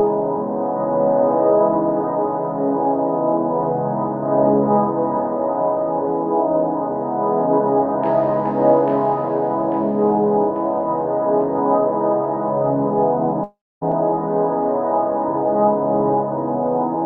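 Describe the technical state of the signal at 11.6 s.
At 11.6 s the audio is intact, with no dropout, glitch or other fault at that moment, and it passes through the call codec as it does elsewhere.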